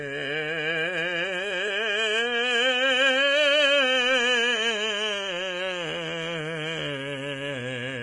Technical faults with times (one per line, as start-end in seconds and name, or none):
0.00-8.03 Vorbis compression